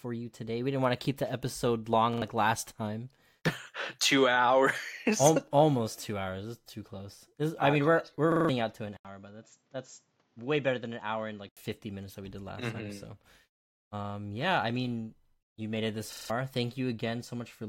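At 2.13 s, after "to keep the episode" and before "last time", a repeated buffer stutters: a 43 ms block, consistent with a 2048-sample buffer, plays twice more with hard joins because new audio arrived late. It recurs at 8.32 to 8.49 s after "I mean we're we're" and at 16.13 to 16.30 s after "you made it this", each time with four extra plays.

From 8.97 to 11.57 s the input switched to a poorer device, likely a fallback microphone. An 80 ms silence opens the section, after which nothing remains above 7.5 kHz, the level drops about 5 dB, and new noise sits about 40 dB below the signal.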